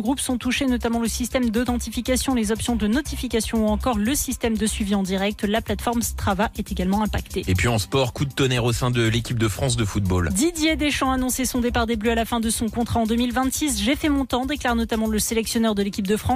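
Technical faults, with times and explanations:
No technical faults can be heard anywhere in the clip.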